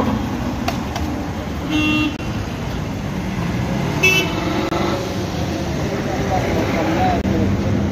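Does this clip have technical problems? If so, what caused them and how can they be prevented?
Yes. Gaps between chunks occur at 2.16 to 2.19 s, 4.69 to 4.71 s and 7.21 to 7.24 s, each a hole of about 25 ms, recurring every 2.5 s. The sound arrives in 2.5 s chunks, and a short stretch of silence sits at each join, so nothing is lost but the flow breaks at every boundary. Trimming codec padding and queuing each chunk for gapless playback before the previous one ends would prevent it.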